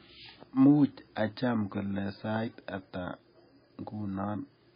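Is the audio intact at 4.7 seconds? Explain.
No. At 4.7 seconds the speech sounds dull and watery, with a swirling, metallic edge on sibilants and softened attacks, and nothing above 5 kHz. This damage runs through the whole clip rather than starting at that moment. The likely cause is heavy MP3 compression at a very low bitrate, roughly 18 kbps. Short of bits, the encoder drops the top of the spectrum and zeroes weak frequency lines that flicker between frames.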